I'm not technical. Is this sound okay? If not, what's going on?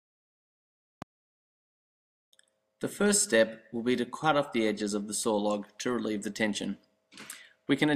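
No. There is one loud pop at about 1.02 to 1.04 seconds, a single sharp burst noticeably louder than the surrounding sound. The sound keeps playing underneath it without any gap, which sets it apart from a dropout, where the audio briefly cuts out. The likely cause is a sudden jolt of electricity, such as a plug being moved, a switch, static, or a hiccup in the playback or recording equipment.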